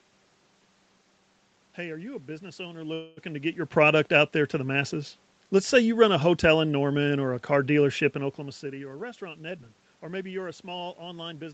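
At 2.93 s, just after "you a business owner", the sound stalls until 3.30 s. This call audio freeze is likely delayed packets emptying the jitter buffer. The last sound is stretched as a fading buzz, about 235 ms is inserted, and nothing is lost before "to get your product".

From 8.65 s to 11.44 s a jitter buffer speed-up takes hold. The buffer had grown too deep. Short pitch-period slices were cut repeatedly, roughly 200 ms in all. Speech runs about 8% faster at unchanged pitch and sounds hurried.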